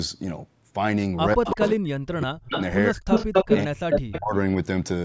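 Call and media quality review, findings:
Speech suppressed in double talk: voice ducks hard, roughly 40 dB at worst, 1.35–2.54, 2.9–3.07 and 3.65–4.35 s. Likely the echo canceller clamping both sides during overlap.

Echo leak: delayed voice copy at 1.45–1.69, 2.53–2.62, 3.1–3.58 and 3.9–4.2 s, 153 ms then 217 ms behind. The first two sit about 5 dB under the talker, the last two about 5 dB over. Likely loudspeaker pickup slipping past the far-end canceller.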